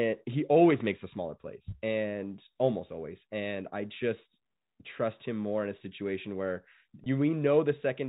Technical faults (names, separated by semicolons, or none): packet loss with pitch repetition